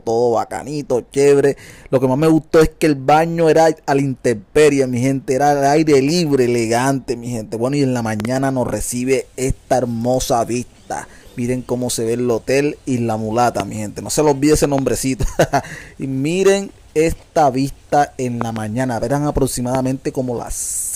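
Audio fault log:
8.20–8.27 s, 13.60–13.62 s, 14.64–14.81 s, 18.41–18.59 s, 19.75–19.77 s: loud pop. A sudden voltage pulse, likely from a switch, plug contact or static discharge, enters the signal path. Each is heard as a sharp pop, doubled at 8.20, 14.64 and 18.41 s, roughly 10 to 15 dB above the sound, which continues underneath.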